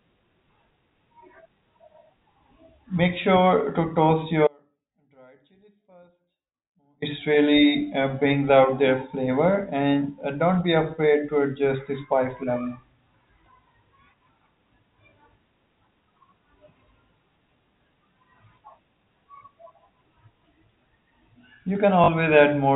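From 4.47 to 7.02 s, an audio dropout to a faint residue: the speech cuts abruptly, leaving a trace roughly 35 dB down, likely a signal loss upstream of a live path. The waveform collapses to a thin band, and the spectrogram goes nearly blank.

At 22.04 to 22.08 s, packet loss with the last packet repeated fills 40 ms, which fits two 20 ms packets. It gives a short robotic stutter, seen as repeated identical blocks.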